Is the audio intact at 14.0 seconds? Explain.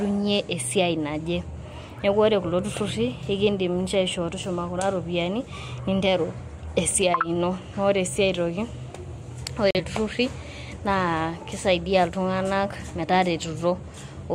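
Yes, at 14.0 seconds the speech plays through cleanly, with no dropout, click, distortion or other fault audible at that moment.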